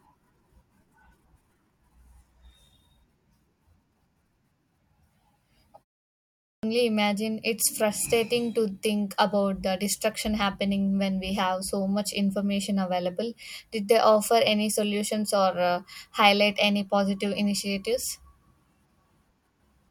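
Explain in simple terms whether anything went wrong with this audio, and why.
At 6.26 seconds, after a half-second pause, the speech cuts back in abruptly on "imagine it's frustrating", with its opening sounds missing. About 0.37 seconds of audio is lost up to 6.63 seconds. This is a clipped start after a pause. During the silence the playback device went to sleep, and it took too long to wake, so the first part of the returning speech was swallowed before the sound came through.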